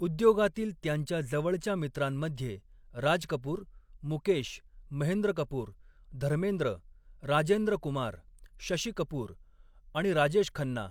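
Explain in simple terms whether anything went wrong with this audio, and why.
Nothing went wrong here.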